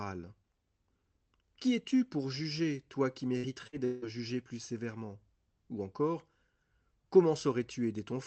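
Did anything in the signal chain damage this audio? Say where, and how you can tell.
Yes. At the network stage, two bursts of packet loss hit the speech after "pour juger toi qui", at 3.37 to 3.46 s and 3.67 to 3.76 s. Each time the receiver stretches the last sound for about 55 ms and turns it down, and roughly 60 ms of audio goes missing.

A longer gap follows from 3.85 to 4.05 s, just before "jugé plus sévèrement", and is most likely a long network dropout. Concealment fills about 170 ms with a decaying continuation of the last sound, never reaching true silence. Speech resumes with about 180 ms lost.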